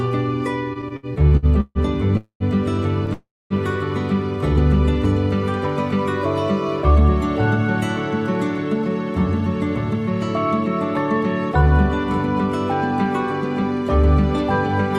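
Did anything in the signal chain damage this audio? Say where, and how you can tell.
Yes, the damage is in the network path and the receiver's jitter buffer. Nothing is missing from the stalls and freezes, but timing is disturbed.

Repeated stalls (stutter) run from 0.73 to 3.1 s. There are ten separate gaps, together about 365 ms of filler, with the longest at 146 ms. That is roughly 15% of the span. Each gap holds a stretched copy of the preceding sound rather than new material, so the audio drags and stumbles. Packets were arriving slower than playback and the buffer kept emptying.

Two call audio freezes sit inside and just after that stretch. The first runs from 2.17 to 2.43 s, with 231 ms of held sound that decays into about 100 ms of silence. The second runs from 3.13 to 3.53 s, with 372 ms filled and about 240 ms silent. Afterward the sound resumes exactly where it stopped. Both were likely caused by packets being held up long enough to drain the buffer completely.

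Jitter buffer speed-up follows, from 6.88 to 8.83 s at 103% speed and from 11.21 to 13.62 s at 102%. The pitch stays put while the pace quickens slightly. Around 70 ms was trimmed in each stretch. The receiver was shedding excess buffered delay, cutting tiny pitch-period slices repeatedly.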